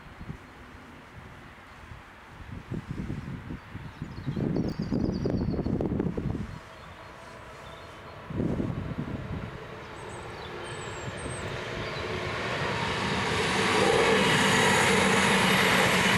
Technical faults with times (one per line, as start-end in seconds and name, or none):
4.64-4.72 chunks out of order
11.42-11.50 chunks out of order